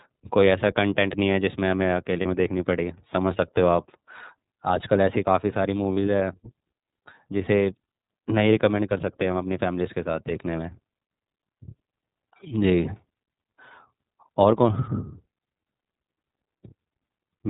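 The speech has passed through the iLBC codec, and the plainly audible coding damage fits its 30 ms frame mode at about 13.33 kbps. Nothing above 4 kHz survives, so the sound is narrowband, a little rough and synthetic. Packets dropped twice, giving lost iLBC frames at 2.21–2.25 s and 5.94–5.98 s, each gap about 30 ms long, which points to a single missing frame. The decoder filled each gap by repeating the last pitch cycle mixed with noise, so both moments sound like a brief held, slightly buzzy vowel. Because each frame is coded independently, the audio recovers almost immediately afterward.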